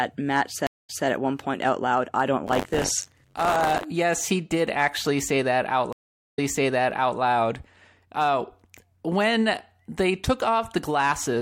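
Stream reconnects at 0.67 s and 5.93 s cut this speech clip to silence for 216 ms and 436 ms. Each time a fresh decoder picks up mid-stream and replays audio from 183 ms and 836 ms earlier. Buffer tearing from 2.46 to 3.85 s adds a steady 93.8 Hz buzz, which fits a 512-sample buffer. In each period, writer and reader cross, and roughly a tenth of every buffer repeats audio about 40 ms old, with hard joins on both sides.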